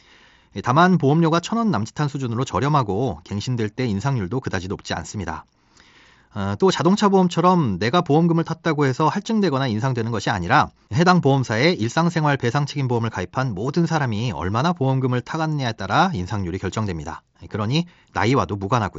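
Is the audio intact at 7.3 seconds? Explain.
Yes, the audio is intact at 7.3 seconds, with nothing there beyond the ordinary sound of speech carried over the Bluetooth mSBC headset codec, which passes nothing above about 7.7 kHz.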